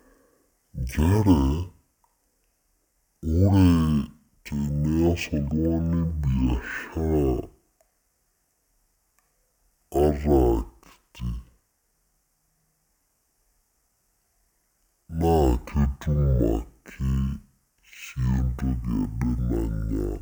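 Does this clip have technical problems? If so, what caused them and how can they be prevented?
Yes. Throughout, the speech plays at half speed and an octave low. This is stereo read as mono: interleaved left and right samples were taken one after another as a single channel. A spectrogram shows lowered harmonics plus a faint mirror image in the upper half. Making the decoder honour the file's declared channel count prevents it.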